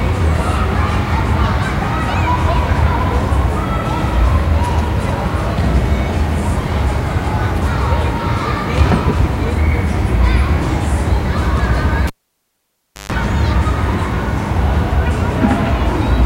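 At 12.07 s a live cable is pulled and plugged in. A pop leaves 1.0 s of near silence with brief 50 Hz buzz. Another pop follows at 13.12 s.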